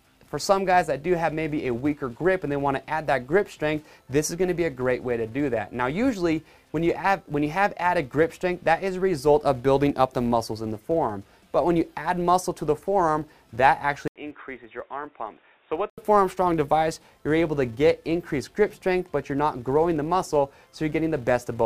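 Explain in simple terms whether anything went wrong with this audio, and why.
Filter restarted on every block, throughout the clip: a steady buzz at 200 Hz sits under the sound. It seems a filter is wiping its memory at the start of each short chunk of audio, 200 times a second, and each fresh start gives a tiny click. Those clicks run together into a buzz that gets louder when the sound gets louder and fades when it fades.

Input switched to a poorer device, from 14.08 s to 15.98 s: the sound drops out for about 80 ms, then comes back quieter and duller, with a faint new background hiss underneath. This is likely the recording jumping to a different, lower-quality microphone or a headset's call mode, which carries a narrower range of sound and has its own noise. At 15.98 s the fuller sound returns.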